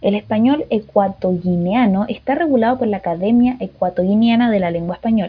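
No technical faults can be heard anywhere in the speech recording, which holds steady and continuous for its whole duration.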